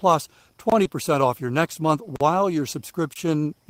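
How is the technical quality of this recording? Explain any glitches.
The speech has audible glitches: three dropouts and one patched-over gap.

Block of digital silence, at 0.70 to 0.72 s, 2.16 to 2.21 s and 3.14 to 3.16 s. The sound stops dead with no fade for about 23 ms, 46 ms and 23 ms respectively, and each is heard as a short hole. Those lengths fit buffer-sized blocks (the longer one twice the others) of zeros written to the output, either because the output buffer was not filled in time or because a calculation produced invalid numbers.

Short concealed packet loss, at 0.83 to 0.87 s, just after the first dropout. About 20 ms of audio never reached the decoder in time, and the receiver filled the gap by extending the preceding sound, following its pitch if it was voiced or using shaped noise if not, then blended back into the real signal. The result is a brief smear or wobble in the speech.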